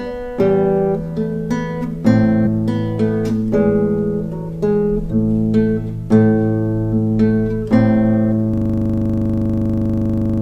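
At 2.42 and 5.07 s, compressed frames are skipped: the audio jumps ahead, roughly 200 ms then 700 ms. From 8.54 s to the end, a system hang loop repeats one 40 ms piece exactly, producing a 25 Hz machine-gun stutter.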